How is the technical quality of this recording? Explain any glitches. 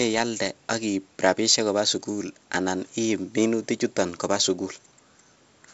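No glitches can be heard: the speech comes through G.722 wideband telephone coding at 56 kbit/s, which leaves nothing above 7.7 kHz and adds only light coding texture, with no breaks, drops or other disturbances in the signal.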